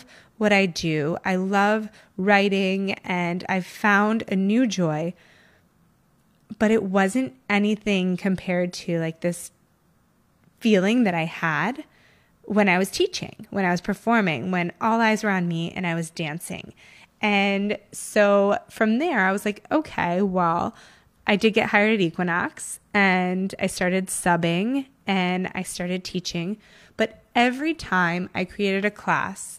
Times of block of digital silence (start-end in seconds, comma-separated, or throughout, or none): none